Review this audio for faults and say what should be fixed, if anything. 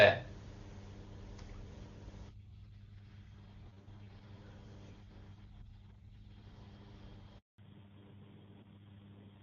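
The sound cuts out completely from 7.38 to 7.58 s, a 200 ms handover gap as the call switched networks and no speech frames arrived.

From 7.58 s to the end the sound turns dull and rougher, with nothing above 4 kHz: a fallback to narrowband, consistent with AMR-NB at about 7.4 kbit/s.

Keeping the call on HD Voice through network handovers, using seamless handover with HD-capable target cells, would prevent both the dropout and the narrowband fallback.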